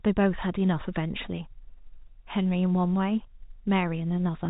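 No technical faults are audible.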